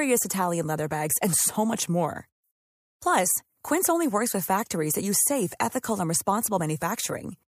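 Listening to the speech recording, nothing stood out as a technical problem at any point.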